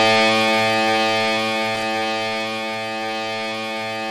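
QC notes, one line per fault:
1.75 to 1.83 s, loose connector crackle: an irregular burst of scratchy crackle lasting under a tenth of a second. A worn or dirty contact in the signal path is shifting and rapidly making and breaking, so the audio is chopped on and off many times in quick succession, and each break or remake of any DC on the line adds its own pop.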